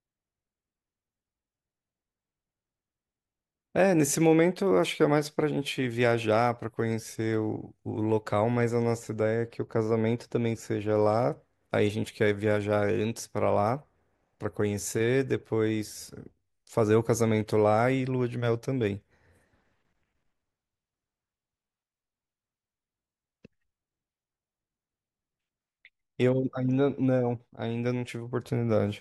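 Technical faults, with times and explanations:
8.95 to 10.95 s, de-emphasis applied wrongly: for these two seconds the speech turns dull and muffled, its top end rolled away. A treble cut meant to reverse pre-emphasis was applied where none existed, or applied twice, tilting the response smoothly downward to about 8 dB below 1 kHz at 10 kHz.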